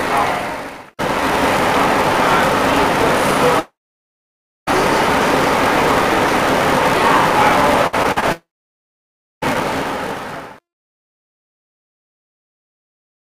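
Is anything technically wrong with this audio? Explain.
Yes, three problems. Throughout, there's a filter restarted on every block: it resets each block, so a tick recurs at about 345 Hz, which fits a 128-sample block, and sounds like a level-following buzz.

From 7.87 to 8.24 s there's repeated packet loss (robotic sound): four short holes, the longest 59 ms, patched by stretching the last sound, so it turns choppy.

At 3.59 to 4.69 s and 8.32 to 9.44 s, about 1.1 s each drops out, likely a long network dropout: a fading buzz or hiss, then nearly a second of silence, and the sound resumes with that stretch missing.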